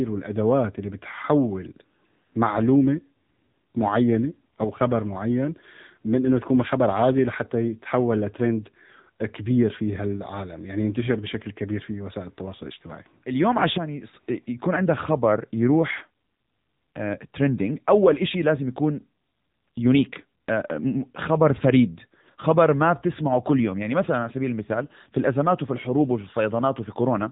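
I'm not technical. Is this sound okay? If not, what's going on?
No. The speech sounds thin, muffled, buzzy and synthetic from start to finish, like an old mobile phone call. This is the AMR narrowband mobile codec, the compression used for 2G and 3G calls. It rebuilds the voice from a simplified model of the throat and mouth, sent in small 20 ms chunks. Everything above about 3.8 kHz is discarded, and the low data rate makes the damage plainly audible throughout.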